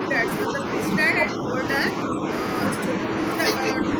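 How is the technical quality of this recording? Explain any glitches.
The speech repeatedly ducks in level. At 0.45–0.69 s, 1.12–1.66 s, 2.05–2.28 s and from 3.74 s to the end, it drops by about 5 dB, most likely speech suppressed in double talk: an echo canceller could not separate this side's talker from the overlapping loudspeaker echo and attenuated both. On a waveform these are brief shallow dips in the envelope, and on a spectrogram they appear as fainter vertical bands.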